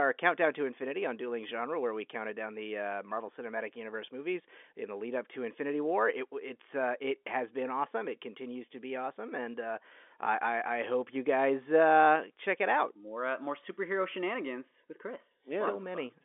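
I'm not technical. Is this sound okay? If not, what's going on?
Yes, nothing is wrong with this recording. It has the narrow, slightly boxed-in sound of an ordinary landline call, because the telephone coding lets through nothing above about 3.8 kHz, so the crisp high sounds are missing, just as on any phone line.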